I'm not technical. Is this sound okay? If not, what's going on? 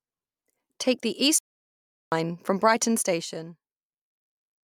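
No. There is a playback stall from 1.39 to 2.12 seconds: the speech cuts out in mid-flow and there is about three quarters of a second of silence before it carries on. The likely cause is that the player briefly ran out of audio to play, or was held up by something else on the device, and output nothing until it caught up. The result is a sudden, unnatural gap in the speech.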